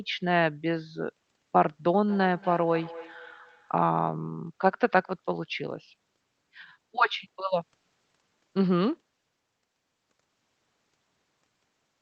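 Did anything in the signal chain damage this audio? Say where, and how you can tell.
Yes. Between 2.06 and 3.98 s there is feedback echo between two devices, a call-processing fault. Repeats return roughly every 200 ms, thinning and ringing, peaking about 17 dB below the speech. A second device replays the audio into this microphone, and the local echo canceller cannot remove sound it did not play.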